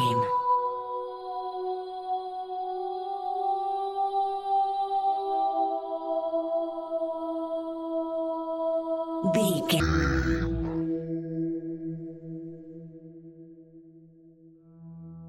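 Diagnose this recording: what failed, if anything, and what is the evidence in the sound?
At 9.8 s the audio drops to half speed and falls an octave, staying there to the end. A faint mirrored image fills the upper spectrum. This is stereo read as mono at the sample-format stage: interleaved left and right samples are played consecutively as one channel.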